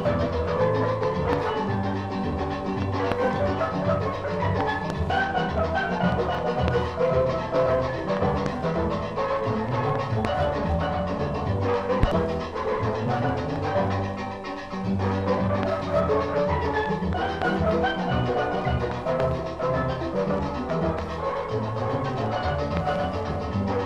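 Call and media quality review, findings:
A small forward jump in the sound at 5.10 s, 6.35 s and 7.99 s, no gap of silence. A few milliseconds skipped each time. Likely dropped buffer (overrun) in capture: samples overwritten before being read, leaving both sides spliced directly.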